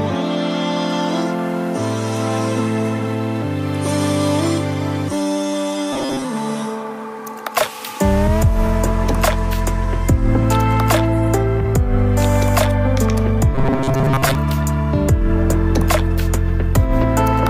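Audio was likely arriving too seldom, so the software looped a chunk of about 7.5 ms, giving robotic sound from repeated short buffers at 5.93–6.25 s and 13.55–14.35 s. Repeats fill most of that time, forcing a rigid, metallic 134 Hz buzz.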